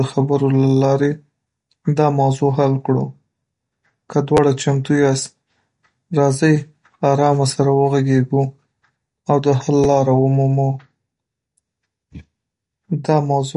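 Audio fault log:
throughout: MP3 compression, likely at a low bitrate near 48 kbps. Starved of bits, the encoder drops weak frequency lines frame by frame and cuts the treble, so nothing remains above 11.2 kHz, and the watery, swirling codec damage is plainly audible across the speech.
4.37 s and 9.84 s: repeated buffer. Audio arrived late, so the device replayed its last buffer once, which fits a 10 ms buffer, with about 10 ms of audio lost each time. Each repeat gives a short stutter, click or brief buzz with a hard join, first just before "چمتو یاست" and then between "او د حل" and "لاره ومومو".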